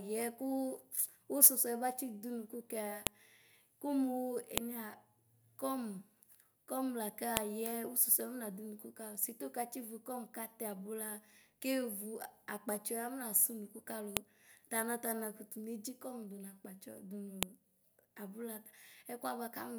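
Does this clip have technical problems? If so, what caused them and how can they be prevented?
Yes. Sharp, loud clicks interrupt the speech at 3.07, 4.58, 7.37, 14.17 and 17.43 s. This is a file header played as audio. Each click marks a joined piece whose header bytes were read as samples. Strip headers before concatenating or streaming WAV segments.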